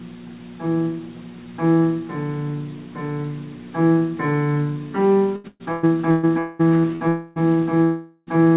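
From 5.36 to 6.26 s there is repeated packet loss with a robotic sound. Four separate gaps, the longest 121 ms, total about 440 ms. Each was patched by extending the preceding audio, so nearly half that span is synthetic. The result is choppy and robotic, with pieces dropped out.

At 6.39 to 6.62 s, 7.08 to 7.39 s and 7.84 to 8.30 s, stretches of about 200, 280 and 440 ms are missing. The likely cause is a long network dropout at each point. In every case the gap is bridged by a continued buzz or hiss rather than silence, and the audio resumes later with the intervening material gone.

A burst of packet loss runs from 6.79 to 6.87 s. About 40 ms failed to arrive in time and was covered by about 46 ms of extended audio, heard as a short held buzz or fading hiss before normal sound returns.

At 6.96 to 7.03 s a short concealed packet loss fills a 40 ms hole with continuation of the last sound. 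It comes across as a brief smear or wobble.

Throughout, the band stops at 4 kHz, which points to a G.711 mu-law call path at 64 kbps.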